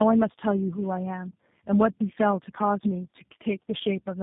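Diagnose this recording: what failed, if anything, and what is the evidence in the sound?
Codec stage: tandem speech coding throughout. Speech sounds rough, muffled and warbly, with nothing above 3.8 kHz. This fits G.729A, GSM and G.729A coders in a row, each re-coding the last one's damage.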